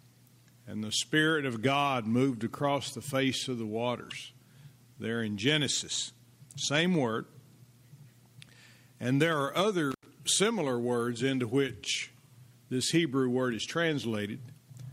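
At 9.91 s an intermittent contact breaks the signal: a loose plug or cable connection opens briefly, cutting the sound out for about 83 ms. The event spans 9.91 to 10.06 s, with crackle at the edges of the gap as the contact separates and reconnects.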